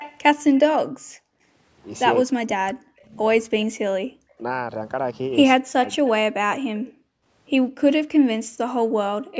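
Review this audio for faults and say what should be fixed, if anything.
Echo leak at 0.0–0.6 s and 5.85–6.85 s: a faint copy trailing the speech by 203 ms, about 20 dB down, likely from a far-end echo canceller missing loudspeaker pickup. On a spectrogram it shows as ghost harmonics offset 203 ms to the right. Better canceller tuning or a headset at the far end would prevent it.

Background gated by the echo canceller at 0.92–1.42 s, 6.77–7.26 s and 8.38–9.37 s: the room tone drops by about 40 dB while the canceller clamps the microphone, leaving flat-line gaps in the waveform. Gentler suppression with comfort noise would hide these holes.

Speech suppressed in double talk at 2.25–4.43 s and 5.56–6.07 s: the speech dips deeply, likely because the canceller confused talker and echo during overlap. This shows as darkened bands in the spectrogram. Stronger double-talk detection would keep the talker audible.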